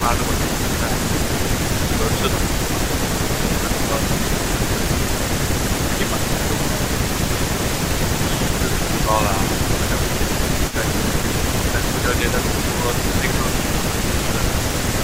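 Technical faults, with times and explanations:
0.0–6.71 s and 8.37–15.0 s, speech suppressed in double talk: the voice dips and thins in patches, about 10 dB at worst early on and about 5 dB later, roughly a second and a half each time. This is likely an echo canceller turning down both talkers while they overlapped.
5.06–11.71 s and 14.67–14.98 s, echo leak: a faint, delayed copy of the voice trails it by 228 ms, about 15 dB below the direct sound. This is likely loudspeaker sound reaching a microphone and getting past an incomplete echo canceller.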